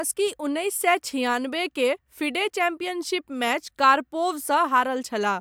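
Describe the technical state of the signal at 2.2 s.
At 2.2 s the speech signal is intact, with no fault present.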